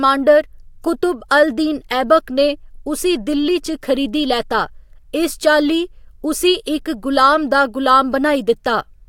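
Nothing stood out on listening to this speech recording.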